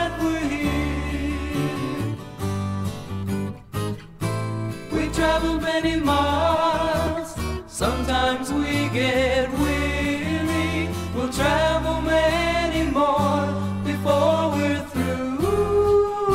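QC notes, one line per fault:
7.07 s and 10.05 s, dropped buffer (overrun): sound skips ahead about 10 ms, likely samples overwritten before being read; waveform shows an abrupt splice, spectrogram a thin vertical broadband line.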